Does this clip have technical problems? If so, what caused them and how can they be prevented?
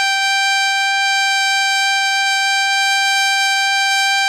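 Yes. Across the whole music clip the treble has a gritty, metallic sheen, and nothing comes through above about 14.8 kHz. That's the sound of HE-AAC compression, likely at a very low rate, something like 20 kbps. The codec keeps the lower spectrum and fakes the top end by copying lower bands upward, so the highs stay bright but their harmonics don't line up with the real ones. To avoid it, encode at a much higher bitrate or use plain AAC.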